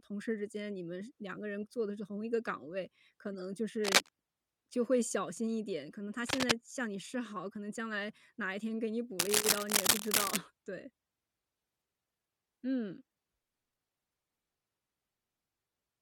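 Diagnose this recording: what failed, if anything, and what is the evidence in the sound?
Codec stage: corrupt frame decoded at 3.33–3.41 s and 7.00–7.03 s. Brief chirping bursts near -35 dBFS mark damaged frames decoded with misplaced spectral energy.

Analogue wiring: cable scratch noise at 3.84–4.10 s, 6.24–6.52 s and 9.19–10.37 s. Rustling sits about 5 to 10 dB above the speech, likely from a worn contact moving.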